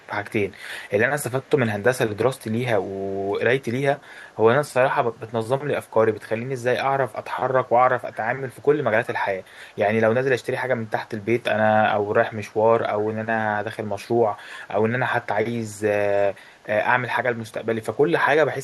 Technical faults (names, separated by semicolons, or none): echo leak